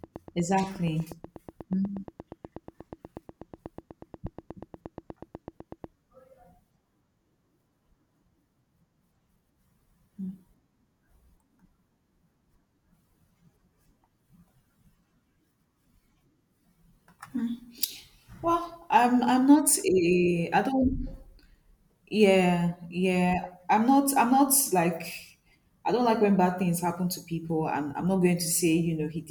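Right from 0.04 s to 5.85 s there's a train of clicks, a steady ticking at about 8.3 per second, around fifty in all, poking a few dB above the speech and audible in the gaps too, likely interference from nearby equipment or a faulty connection.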